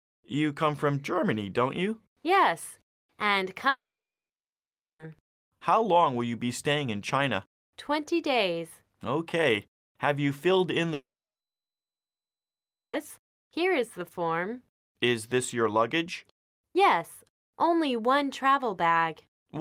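At 3.69 s the sound gives way to a brief fading buzz, then near-silence until 5.01 s. At 10.93 s the same thing happens for longer, with quiet lasting until 12.95 s. This is likely a long network dropout: the receiver stretched the last sound for about a tenth of a second, then had nothing to play. Unlike a brief concealed glitch, the gaps run 1.3 s and 2.0 s, and the sound resumes further on, skipping what was lost.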